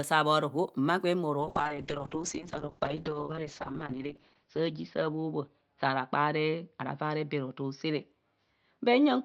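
From 1.41 s, just after "saa bhoroho mma gwen", a call bitrate drop starves the encoder: the sound turns watery and muffled, consistent with a fall from 64 to 7 kbps, lowest for 2.79 s, unrecovered. A spectrogram shows a hard ceiling at 6 kHz, down from 20 kHz, with smeared, blocky texture beneath.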